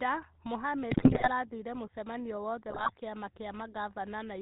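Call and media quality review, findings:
GSM full-rate codec, whole clip. Buzzy, gravelly roughness on the speech, nothing above 4 kHz. Pulse-driven vocal-tract model keeps only a sparse, regularly spaced excitation. Damage plainly audible. The sound fits the 13 kbps full-rate coder.

GSM bit errors, 0.90–1.29 s and 2.70–2.91 s. Squawks, pops and gargling break up the speech. Corrupted filter, pitch and gain parameters reach the decoder. Spectrum bends, level jumps per frame. The first burst sounds heavier and spans more frames.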